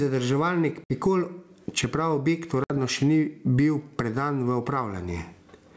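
Gain pumping runs throughout the speech, with the gain swinging by roughly 20 dB, likely from excessive input gain being clamped by a fast limiter.

Packet loss on an ADPCM call hits at 0.84 to 0.96 s and again at 2.64 to 2.74 s, between "čeprav objekt" and "še ni bil predan". Each time about 60 ms, a few packets' worth, drops to hard-edged silence. The decoder's predictor and step size then no longer match the sender's, so the speech returns slightly distorted before settling.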